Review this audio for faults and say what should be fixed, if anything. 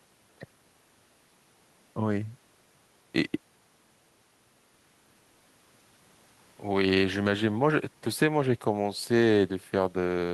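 No faults heard in the speech, so nothing needs fixing.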